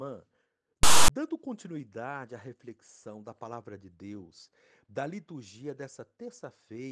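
A speech recording with file tags played as audio from 0.83 to 1.09 s, before "continuidade à reflexão da": text gives a hard-edged, one-sided rasp ending in padding silence, unlike a dropout's pure gap.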